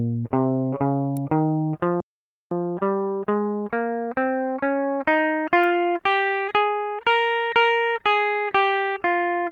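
At 1.17 s a sharp snap cuts through the music. It sounds like an electrical switching spike, likely from a nearby switch or motor arcing onto the line. A second snap comes at 5.64 s. At 2.00 s the music halts mid-flow for about half a second, 508 ms, until 2.51 s. This playback stall likely comes from the player running out of data. From 2.51 s to 5.51 s the music runs 1.1 times fast at unchanged pitch. This time-compressed catch-up trims small pieces to clear the backlog.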